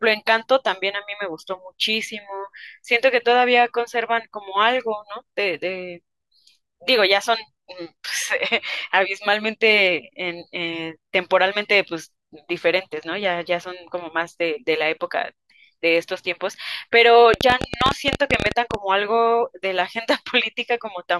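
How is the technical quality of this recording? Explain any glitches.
The recording has one clear glitch near the end of the speech. A train of clicks runs from 17.34 to 18.75 s: about twenty sharp, similar pulses at roughly 15 per second, unevenly spaced, most likely interference or a faulty connection or power supply. They pop out well above the speech.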